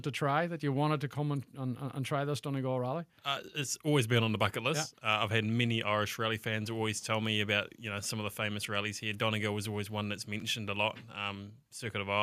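Nothing technically wrong turns up anywhere in this audio, so there's no fault to point to here.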